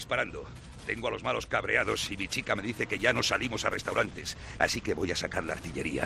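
From 2.91 s to the end the sound turns rough and watery, with the top end audibly dulled, compared with the cleaner opening. This is a call bitrate drop: the call's bandwidth estimate fell and the encoder's bitrate was cut from 48 kbps to 16 kbps, bottoming out for about 2.32 s. With a third of the bits, the Opus encoder quantises the signal more coarsely and trims the high frequencies.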